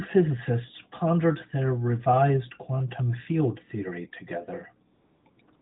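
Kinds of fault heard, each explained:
AMR comfort noise: near the end, from about 4.94 to 5.26 s, the real background gives way to a smooth, even hiss that the receiver generates once the phone stops sending speech frames. It then switches in again at 5.30–5.38 s, 5.42–5.48 s and from 5.56 s to the end. Unlike a dropout, these gaps never fall to silence. Unlike lost-packet concealment, they hold no smeared or repeated speech, only flat synthetic noise.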